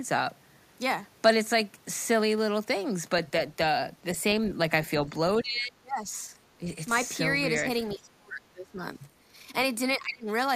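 The speech dips hard at 5.37–6.12, 7.94–8.81 and 9.97–10.28 s, by up to roughly 30 dB: likely speech suppressed in double talk, the echo canceller turning this voice down along with the loudspeaker echo.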